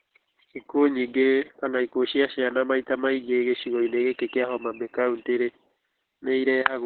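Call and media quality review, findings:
Opus voice compression, whole clip. Speech muffled, hoarse, slightly robotic. Nothing above about 4.4 kHz, so narrowband. Heavy codec damage. Coarse SILK linear-prediction coding of the excitation, consistent with a very low rate, around 8 kbps. Encoder narrowed the band to save bits.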